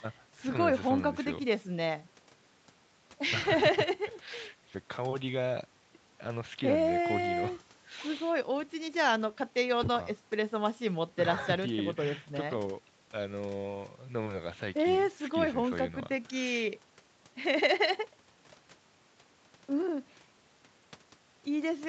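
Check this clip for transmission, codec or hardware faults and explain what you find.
I hear no faults.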